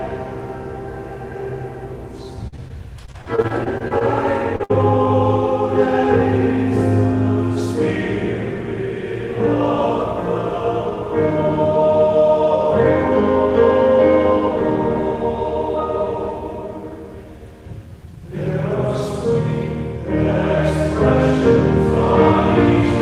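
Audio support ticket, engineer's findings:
Repeated packet loss (robotic sound), 2.47–4.02 s. Choppy stretch, with bits dropping out all through it. 15 separate gaps, roughly 0.3 s lost in total, longest one 48 ms. Jitter buffer or concealment side: each hole gets patched by stretching the last bit of audio, then the next hole lands right after, so about a fifth of that span is synthetic fill.

Short concealed packet loss, 4.56–4.62 s. Quick smear or wobble. About 40 ms never made it to the decoder in time. The receiver carried the preceding sound forward for about 31 ms and then crossfaded back into the real signal, so there's a small piece missing but no hard break.

Burst of packet loss, 4.64–4.71 s. Only about 20 ms after the previous one. About 60 ms gone in one go, probably several packets back to back. Concealment holds the last sound and fades it down across the gap, giving a brief buzz or hiss, then audio picks up further along with that chunk simply missing.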